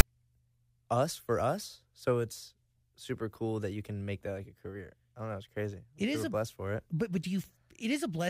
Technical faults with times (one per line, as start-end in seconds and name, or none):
0.00 file tags played as audio